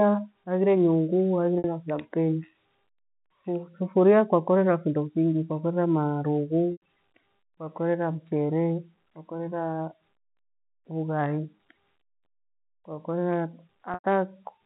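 Packet loss with pitch repetition occurs at 1.58 s for 60 ms, then at 6.72 s and 13.94 s for 100 ms each. The receiver repeats the last pitch period, giving a brief buzzy hold. The longer gaps fade toward silence before the speech returns. The narrow G.711 telephone band is audible throughout.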